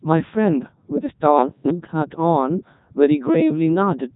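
Codec 2 vocoder damage runs throughout: at 3.2 kbit/s only pitch, voicing and envelope survive, so resynthesised speech sounds robotic and buzzy, with nothing above 3.8 kHz.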